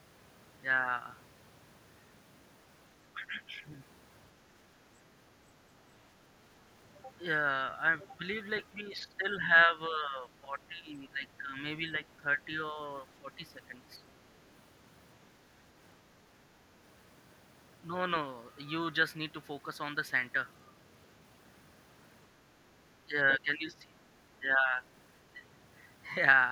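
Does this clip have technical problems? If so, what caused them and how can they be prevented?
Yes. Speech suppressed in double talk: the level dips by roughly 10 dB at 8.81–9.11 s, 9.65–11.56 s, 13.2–13.43 s and 23.05–23.84 s. These show as sudden notches in the waveform and fainter spectrogram bands. An echo canceller likely mistook overlapping speech for echo. Better double-talk detection prevents this.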